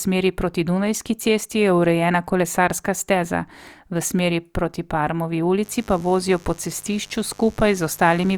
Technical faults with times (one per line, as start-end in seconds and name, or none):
5.62-8.37 mains buzz